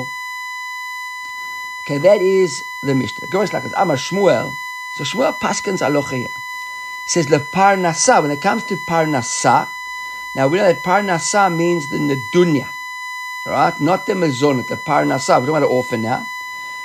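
From start to finish the speech carries USB whine, a fixed-pitch tone at 1 kHz, strongest at 2 kHz and fairly loud against the speech. Current drawn in 1 ms bus frames leaks through power or ground. A spectrogram shows unbroken horizontal lines at both frequencies.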